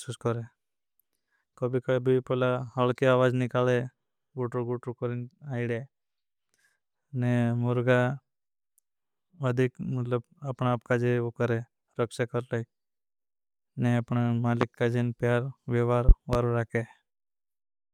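At 14.61 to 14.65 s, between "ने अपना" and "काजे प्यार विवार", a loud pop cuts in, roughly 20 dB above the speech. From 16.09 to 16.37 s, just after "काजे प्यार विवार", two more pops land in quick succession, each with a similar peak. All are sharp thumps riding over speech that continues beneath, likely from a voltage pulse such as static or a switching transient. The waveform shows tall isolated spikes. The spectrogram shows thin vertical broadband stripes.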